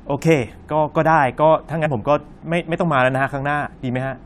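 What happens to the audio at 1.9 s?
Around 1.85 to 1.87 s, compressed frames are skipped. About two frames of roughly 23 ms each never play, so the speech jumps ahead by around 50 ms.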